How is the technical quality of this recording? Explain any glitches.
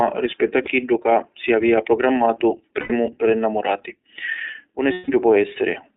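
The recording is narrowband and slightly rough, with three brief dropouts that turn into a held, buzzy tone.

Throughout, the speech sounds thin and synthetic, confined to roughly 300 Hz to 3.6 kHz. That is the iLBC codec: it codes each 20 ms frame independently at a low rate, consistent with its 15.2 kbps mode, and discards everything outside the telephone band.

At 0.64–0.69 s, 2.80–2.92 s and 4.92–5.10 s, the sound briefly freezes into a breathy, buzzing held vowel. These are lost iLBC frames, about 20, 100 and 160 ms of missing audio. To fill each gap, the decoder repeats the last pitch cycle mixed with noise, which fades over the longer gaps. Because iLBC frames stand alone, normal speech returns almost immediately afterwards.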